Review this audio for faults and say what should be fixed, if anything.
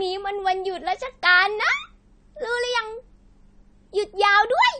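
AAC compression, throughout the speech: the audio stops dead above 9 kHz and carries plainly audible smearing and fizz on sibilants, likely from AAC-LC coding at a low bitrate, which fits about 32 kbps, where the encoder drops high bands and quantises the rest coarsely. To prevent it, encode at a higher bitrate or keep an uncompressed copy for processing.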